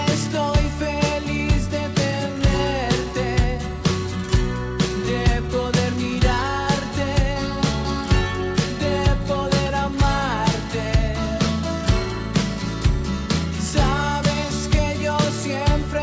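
No faults heard; the audio carries the normal character of a WebRTC call path, with nothing above 8 kHz, which fits a wideband codec such as G.722.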